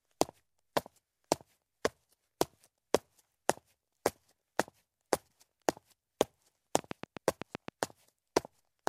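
A train of clicks runs from 6.79 to 7.69 s: about seven regular pulses at 7.8 per second, roughly 15 dB above the sound, likely from interference.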